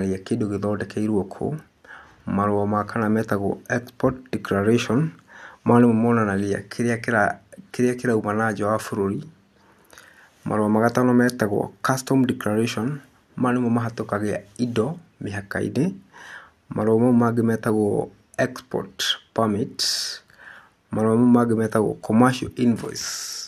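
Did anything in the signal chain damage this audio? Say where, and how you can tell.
No, nothing along the chain seems to have damaged this speech recording, so there's no stage to point to.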